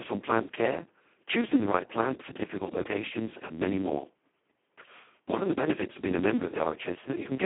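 The speech passed through the Speex codec at its lowest quality setting, which points to a rate of about 2 kbps. Too few bits remain for the excitation, so the voice comes out hoarse, noisy and robotic throughout, confined to a telephone-like band with nothing above 3.8 kHz.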